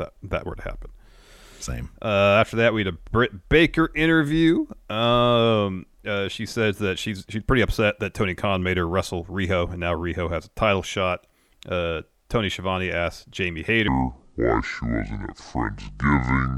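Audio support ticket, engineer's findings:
Section at the wrong speed, 13.88 s to end. Speech slowed to 0.613x, pitch down about ten semitones. Likely clock mismatch in playback or resampler.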